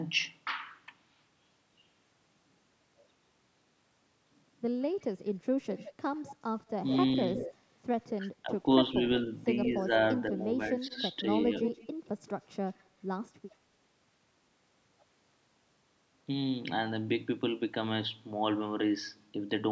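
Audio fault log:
4.81–5.05 s, 5.74–8.1 s, 10.69–11.03 s and 11.65–13.27 s, echo leak: a delayed copy of the speech trails it by about 170 ms. It is faint (about -35 dB) at first, then about -10 to -15 dB. This is likely a far-end loudspeaker echo slipping past its canceller. The fixed lag and discrete copy set it apart from room reverberation.
8.16–9.03 s and 9.88–11.77 s, speech suppressed in double talk: while the other side also speaks, the talker's level dips in short pieces. The drop is around 15 dB in the first stretch and about 5 dB in the second, roughly 0.2 s and 0.3 s in total. This is likely an echo canceller clamping down on both talkers. The dips track the overlap, which marks them as suppression rather than random dropouts.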